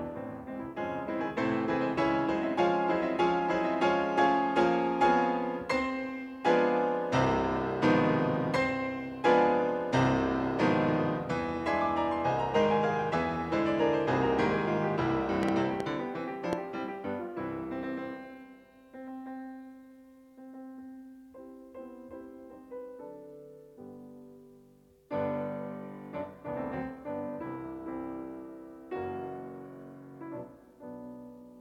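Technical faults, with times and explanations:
15.43–16.54 s, train of clicks: about four sharp, same-shaped pops at roughly 2.7 per second, spaced unevenly and standing about 15 dB above the sound. This is likely interference or a faulty connection or power supply. Identical repeated pulses distinguish it from random crackle or a single isolated click.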